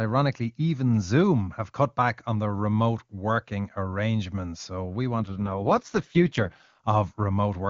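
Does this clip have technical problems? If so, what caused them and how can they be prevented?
Yes. There's an AMR rate drop from 5.2 to 6.79 s. The speech suddenly turns rough, raspy and a bit synthetic, which fits the codec being pushed from the clean 23.85 kbit/s wideband mode down to its 6.6 kbit/s mode, most likely because the radio link weakened. The bandwidth holds and nothing cuts out, so it's the coarser vocal tract modelling at that low rate you're hearing until it recovers. To prevent it, improve coverage or signal strength where the call is made.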